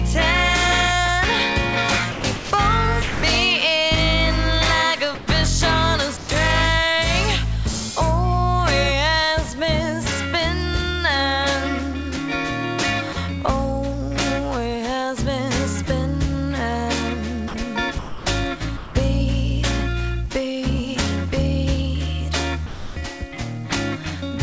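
The audio comes through a wideband call path with nothing above 8 kHz, consistent with G.722, and shows two kinds of gating fault. Sound chopped by the voice detector appears from 2.12 to 3.23 s and from 17.48 to 18.95 s. Within each stretch the signal repeatedly cuts in and out, with about 480 ms and 510 ms respectively replaced by synthetic comfort noise. The likely cause is the sender's voice activity detector toggling transmission on and off while the level hovers near its threshold. Sound dropped by the voice detector occurs at 5.15 to 5.27 s and 6.17 to 6.29 s (120 ms each), 13.13 to 13.16 s (30 ms), and 22.66 to 22.96 s (300 ms). Each time the signal is lost outright and steady comfort noise fills the gap until the sound resumes, likely because the detector classified quiet material as background and stopped sending.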